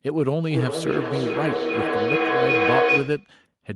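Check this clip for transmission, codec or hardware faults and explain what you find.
A feedback howl runs from 0.50 to 3.39 s. A second device in the same room is evidently on the call, so its loudspeaker output returns to the microphone and gains level on each trip. The repeats build instead of decaying and collapse onto a tone around 500 Hz, pulsing roughly every 0.4 s and peaking about 3 dB above the speech. A spectrogram shows a bright horizontal line near 500 Hz, and the waveform swells in periodic bulges.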